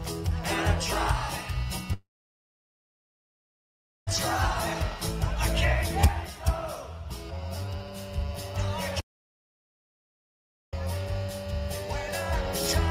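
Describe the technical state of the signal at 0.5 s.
At 0.5 s the signal is intact, with no audible fault at that moment.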